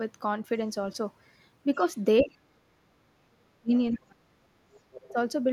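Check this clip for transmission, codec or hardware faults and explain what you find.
The speech has two related faults, both pointing to an echo canceller struggling while both ends talk at once.

Speech suppressed in double talk: the talker's speech sinks, by around 30 to 40 dB at its deepest, from 2.22 to 2.54 s, 3.25 to 3.71 s, 3.92 to 4.67 s and 4.98 to 5.17 s, sounding like pieces being cut away. The likely cause is the echo canceller failing to tell the local talker from the loudspeaker's playback of the far end, so it attenuates everything the microphone picks up while the other side speaks.

Other side's voice leaking through: a faint second voice surfaces briefly from 3.94 to 3.98 s and more clearly from 4.74 to 5.12 s, roughly 20 to 25 dB below the talker. It likely comes from the far end's audio playing through the talker's loudspeaker and reaching the microphone, with the echo canceller leaving a residue it did not fully subtract.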